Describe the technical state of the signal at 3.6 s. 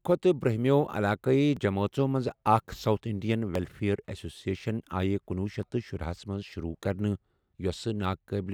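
At 3.55 s there is audio missing between chunks, likely a piece of roughly 10 ms lost as a 2 s processing chunk closed and the next opened. The two sides butt together as a brief skip just before "ایٚسوسِییشَنٕ آیہِ کنۄہ شیتھ".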